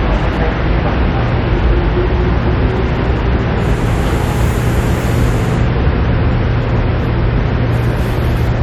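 A recording of sounds with no audible technical faults anywhere in the signal.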